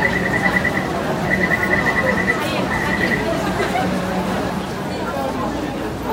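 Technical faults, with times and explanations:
1.25–1.75 s and 4.0–4.5 s, chunks out of order: each span sounds briefly jumbled. Two 250 ms chunks play swapped, one arriving a chunk late, so nothing is lost but the sequence breaks at three hard joins.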